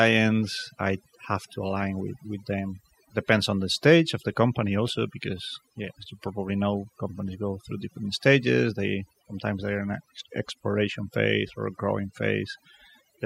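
From start to finish the speech carries overdone noise removal. The noise reduction stage was set too aggressively for the amount of noise in the recording, so individual frequency bands that sit close to its noise estimate are pulled far down or muted outright. Quieter voice components fall under that threshold and vanish with the noise. Between phrases the floor drops and breaks up into twinkling specks.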